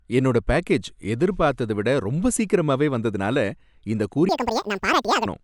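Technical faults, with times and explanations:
4.29 to 5.26 s, wrong sample rate: for the last stretch of the clip the speech runs at double speed and sits a full octave high, about 12 semitones, so it sounds squeaky and rushed. The material appears to have been captured at 24 kHz and then played back at 48 kHz without any rate conversion. Every sample goes by twice as fast, which shortens the timing and raises every frequency together by a factor of two. The effect stops at 5.26 s.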